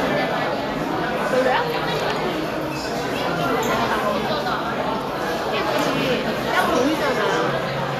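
Vorbis compression runs throughout the clip. Nothing is present above 14.2 kHz, and the treble that remains sounds hissy and grainy, with roughened tones and softened attacks. The likely cause is a low-quality Vorbis encode, which fits a bitrate near 37 kbps. At that rate the encoder keeps only a smooth spectral outline and coarsely quantises the fine upper detail, so it turns into noise of similar energy. The damage is plainly audible.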